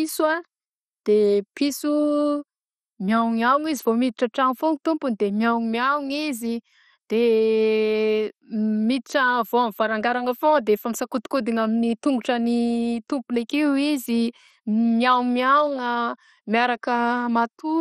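MP2 compression damage runs through the whole speech recording, and it is heavy. Nothing is present above 14.6 kHz, and the sound is dull, with a gurgling, granular roughness. This is most likely MPEG Layer II coding at a low rate, consistent with about 56 kbps. Starved of bits, the encoder shut off the upper sub-bands and quantised the remaining ones coarsely, so their flickering leaves the grainy, burbling texture.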